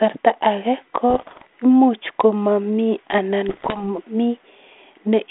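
From 1.10 to 1.47 s, and again from 3.48 to 3.84 s, the speech breaks into pops and rough bursts. These are bit errors on an ADPCM link. Each flipped bit upsets the decoder's step size and predictor. The damage rings on briefly, with sudden level jumps.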